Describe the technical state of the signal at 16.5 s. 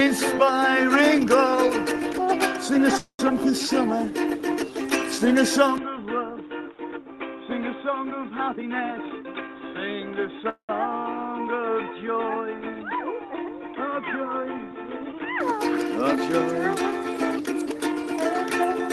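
At 16.5 s the signal is intact, with no fault to be heard at that moment beyond the ordinary character of the WebRTC call path it travels through.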